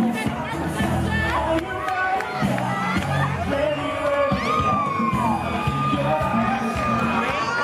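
No technical faults are audible anywhere in the clip.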